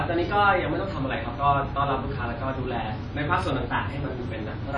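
Speech with plainly audible WMA compression throughout: a ringing, washy smear with hiss that breathes with the voice, and nothing above 9.8 kHz, which fits a low bitrate near 32 kbps. Unlike a plain low-pass filter, the damage likely comes from the codec's long transform blocks.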